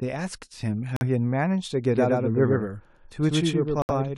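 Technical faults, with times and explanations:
0.96 to 1.03 s and 3.82 to 3.91 s, corrupt frame muted: speech drops abruptly to silence, consistent with two then three damaged frames discarded; waveform shows flat gaps, spectrogram blank columns.
1.95 s to end, doubled audio track: an equally loud full-band copy trails roughly a tenth of a second behind, likely a second capture path; spectrogram shows shifted duplicate patterns starting abruptly.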